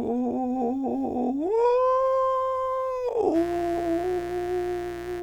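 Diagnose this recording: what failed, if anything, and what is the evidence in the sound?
Mains buzz from 3.32 s to the end: an analogue wiring fault lets sharp 60 Hz switching spikes into the music as a raspy buzz roughly 15 dB below it.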